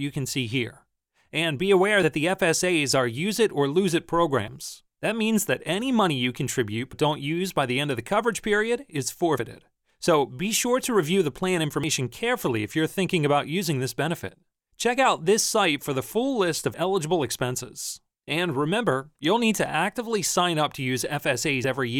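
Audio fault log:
2.03, 4.48, 6.93, 11.84, 14.29, 16.74 and 21.64 s: audio missing between chunks. At each of these points the sound jumps forward, dropping roughly 50 ms, and the two sides are butted together with no silence between them, so each one is heard as a brief skip. The skips recur about every 2.5 s. That regularity points to the audio likely being handled in blocks of that length, with a short stretch lost each time one block closes and the next opens.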